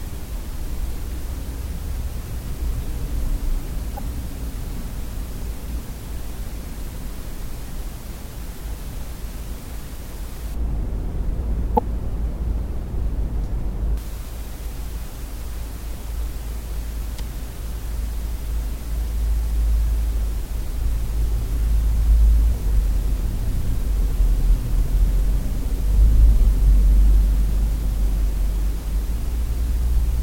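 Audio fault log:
3.95–3.99 s, 11.75–11.79 s and 22.74–22.77 s: damaged data in a compressed stream. Each brief blip, lasting 30 to 42 ms, is a stretch of corrupted frames that the decoder misreads, loses sync on, and skips while hunting for the next valid frame header.
10.54–13.98 s: de-emphasis applied wrongly. A treble cut was applied to audio that had no pre-emphasis to undo, or was applied twice, so the response slopes smoothly downward to about 11 dB below 1 kHz at 10 kHz, making this passage sound dull and muffled.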